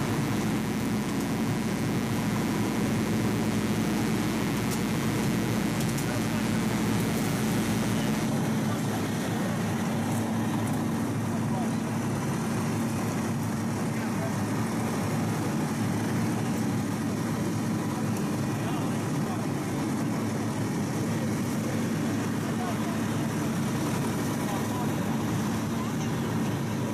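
There's mains buzz from the start to 8.26 s: a raspy 60 Hz buzz with harmonics into the kilohertz range, fairly loud against the audio, from switching spikes leaking in.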